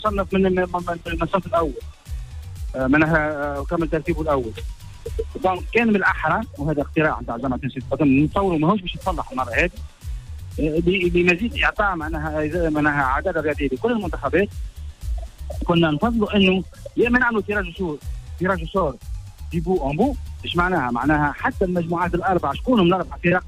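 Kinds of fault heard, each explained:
No kinds of fault are heard in this clip.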